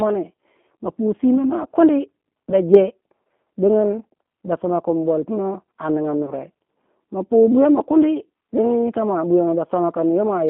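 G.729 codec damage runs throughout: the speech is rebuilt from a vocal tract filter and sparse pulses at 8 kbit/s, so it sounds rough and synthetic, band-limited to about 200 Hz to 3.4 kHz.

VoIP packet loss concealed by the speech codec appears at 0.36 s, just before "ma pu simba mua", and from 6.26 to 6.32 s, right after "kin bolpumo a ninga". Each time about 20 ms of audio, fitting a single lost packet, is extrapolated into a brief buzzy tone or coloured noise that fades.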